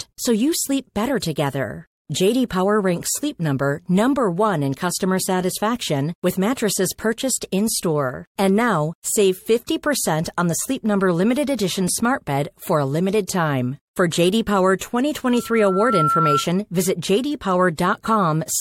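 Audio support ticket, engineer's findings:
Pre-echo: short hiss ahead of attacks, at 1.21 s (after "so you sleep better"), 2.49 s, 8.37–8.39 s, 9.67 s (after "now save"), 13.28 s (after "bed for a limited"), 14.8 s and 17.77 s. Each is 11–20 ms of noise about 17–22 dB above the preceding quiet. Probable component: the transform codec. Quantisation noise is spread across a block that fits about 26 ms, and the encoder does not appear to switch to short blocks, so each attack sounds smeared.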